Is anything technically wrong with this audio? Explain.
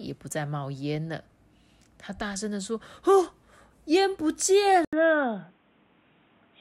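Yes. At 4.85 s the speech goes silent for about 80 ms, then continues to the end sounding dull and boxy, with nothing above 3.8 kHz and a faint new background noise well below the speech, at much the same loudness. The likely cause is an input switched to a poorer device, a narrower-band microphone or headset call profile. A plain filter or EQ change would not bring the brief gap and a different noise floor.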